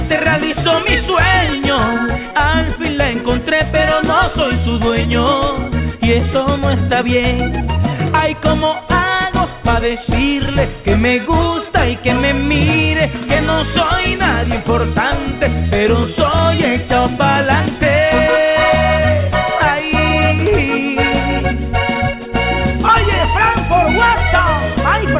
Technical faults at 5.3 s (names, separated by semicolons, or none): none